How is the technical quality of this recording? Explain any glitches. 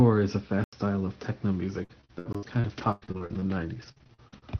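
The recording has two distinct glitch types in speech carried over an Opus call path that limits the top end to about 6 kHz.

At 0.64–0.73 s and again at 2.33 s, blocks of digital silence cut the speech to silence with no fade. The lengths of about 85 ms and 21 ms suggest missed 4096- and 1024-sample output buffers. Unlike concealment, nothing fills these holes.

From 1.83 to 4.44 s, repeated packet loss produces choppy, robotic speech. The decoder stretches the last sound over each missing stretch, the longest about 99 ms, which is what fills these gaps rather than leaving silent holes.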